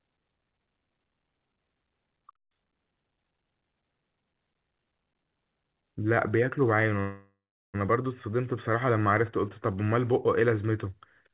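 At 7.00 s the speech stalls for about 0.76 s, a call audio freeze that likely comes from packets arriving late and the jitter buffer running dry. The last sound is stretched into a fading buzz that sinks to silence for roughly 0.34 s, then speech resumes where it left off at 7.76 s, now running about 0.74 s later, with nothing lost. On a spectrogram, smeared horizontal bands decay into a blank gap. The waveform shows a shrinking envelope, then flat line. Across the clip, nothing reaches above 4 kHz, which fits a narrowband G.711-style call path.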